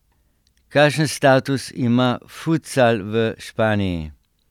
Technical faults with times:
none

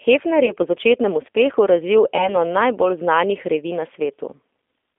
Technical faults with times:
0.00-4.99 G.729 codec
0.46-0.52 VoIP packet loss concealed by the speech codec
2.17-2.37 VoIP packet loss concealed by the speech codec

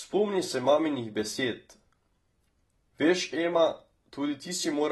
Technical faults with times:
0.00-4.92 AAC compression

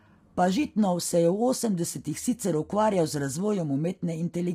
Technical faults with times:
0.00-4.54 low-delay AAC compression

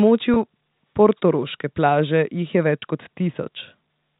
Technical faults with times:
0.34-0.36 packet loss with pitch repetition
2.80-2.82 packet loss with pitch repetition

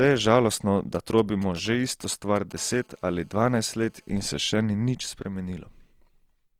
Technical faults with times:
0.00-6.59 Opus compression
0.95-2.53 GSM signalling bursts
2.57-4.45 GSM phone buzz

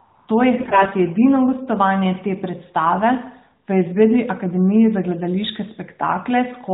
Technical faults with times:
0.58-0.93 AMR bit errors

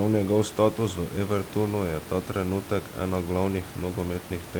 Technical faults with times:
none

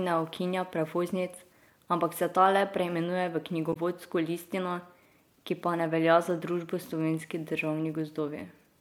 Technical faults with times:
3.70-3.77 damaged data in a compressed stream

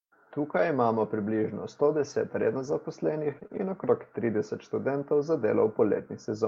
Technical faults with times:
0.57-0.67 lost packet rebuilt from error correction
2.39-2.73 lost packet rebuilt from error correction
3.31-3.57 lost packet rebuilt from error correction
3.39-3.51 short concealed packet loss

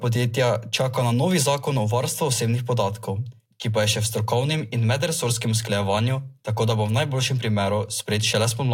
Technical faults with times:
none

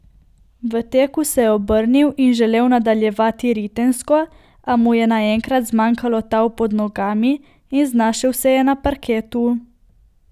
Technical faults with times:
none

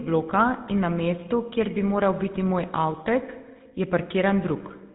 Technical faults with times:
0.00-4.94 GSM full-rate codec

